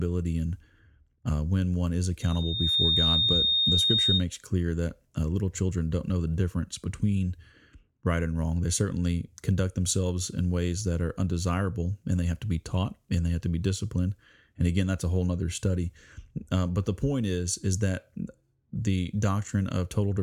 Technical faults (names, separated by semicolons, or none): loudspeaker feedback squeal